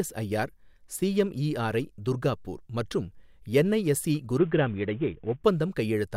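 Speech, with a Bluetooth SBC bit pool drop from 4.38 to 5.44 s: the treble dulls and gritty quantisation noise rises, as the link cuts bits to the upper sub-bands and coarsens the rest. The degradation fits a bit pool falling from 28 to 5, roughly 54 kbps, before recovering.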